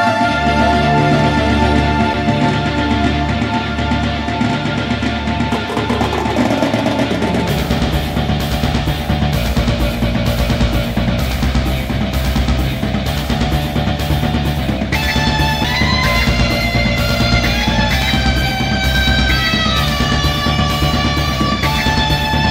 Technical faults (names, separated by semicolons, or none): CD skip